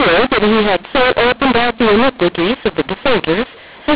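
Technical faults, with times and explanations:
throughout: mu-law and A-law mixed up. A-law telephone samples are decoded as mu-law, misplacing levels and lifting quiet samples, so speech turns harsh and pauses hiss.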